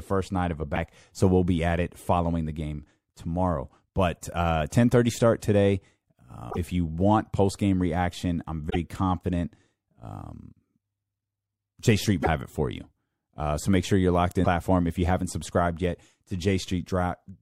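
Five short bursts of damaged data in the compressed stream punctuate this speech: 0.72 to 0.77 s, 6.47 to 6.58 s, 8.66 to 8.76 s, 12.19 to 12.27 s, and 14.41 to 14.46 s, each between about 50 and 110 ms. At each one, corrupted bytes trip up the decoder, which misreads those frames and loses sync until it finds a clean frame header again. What you hear is a brief chirpy squawk or blip cutting into the sound.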